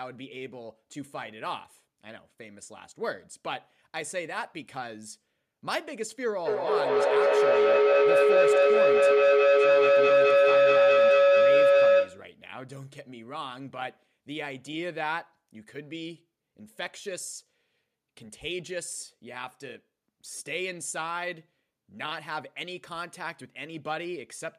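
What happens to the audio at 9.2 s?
At 9.2 s a feedback howl is under way, running from 6.45 to 12.35 s. Sound leaving a loudspeaker re-enters a microphone on the same call, and each trip round the loop adds level, so the repeats, coming roughly every fifth of a second, narrow onto a tone around 500 Hz that peaks about 13 dB above the speech. A spectrogram shows a bright horizontal band near 500 Hz, and the waveform swells into a dense block.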